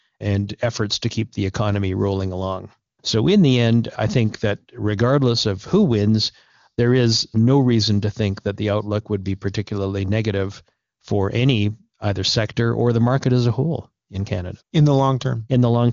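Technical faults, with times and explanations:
No technical faults can be heard in this speech clip.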